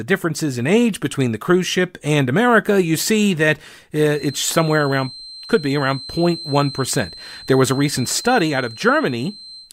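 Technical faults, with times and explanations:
4.06 s to 9.72 s, feedback whistle: just after "you see that uh", the loudspeaker-to-microphone loop likely settles right at its feedback point, where the path's gain at one frequency balances the losses, so that tone sustains itself without growing into a howl. What you hear is a thin, steady whistle near 4.1 kHz riding some 20 dB beneath the speech, slowly swelling and fading in level and continuing until the clip ends.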